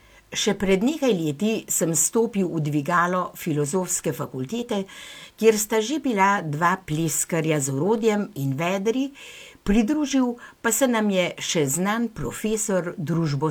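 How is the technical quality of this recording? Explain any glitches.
No glitches or technical faults can be heard here.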